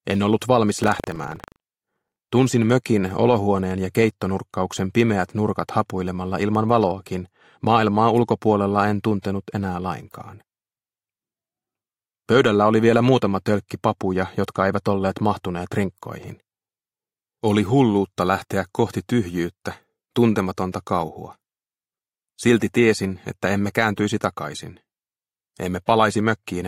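Buffer tearing from 0.80 to 2.20 s gives a 25 Hz rattle: each 40 ms period splices in a small slice of audio roughly 150 ms stale.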